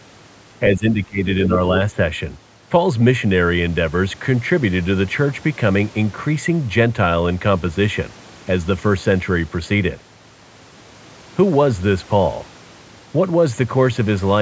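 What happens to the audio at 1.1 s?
Speech suppressed in double talk covers 0.74 to 1.2 s, so 1.1 s falls inside it. The voice sinks by as much as about 20 dB. The likely cause is an echo canceller that could not tell this talker from the far end speaking at the same time, so it turned both down.

Channel delay (comb filtering) is present here too, as it is throughout. One channel lags by a tiny amount, which fits a delay of a few samples, around 0.1 ms. Summed to mono, this cuts a notch near 5 kHz and leaves the voice hollow.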